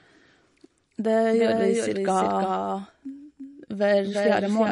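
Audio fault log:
throughout: doubled audio track. A second full-band copy of the speech runs about 300 ms behind the original and roughly 5 dB quieter, so every syllable is followed by a distinct repeat rather than a smeared tail. The repeat has no decay and no room colour, which rules out reverberation and points to the same signal summed twice. The likely cause is the audio being captured again through a slower path, or an edit leaving two out-of-step copies in the mix.
throughout: MP3 compression. The damage is plainly audible: nothing is present above 10.6 kHz, so the top octave is cut off cleanly, and the speech takes on a watery, swirling quality as weak spectral components drop in and out between frames. Sibilants carry a metallic, chirping edge, and consonant attacks lose definition as they spread in time. This is likely a low-bitrate MP3 encode, consistent with a rate around 40 kbps, where the encoder discards detail it cannot afford to code.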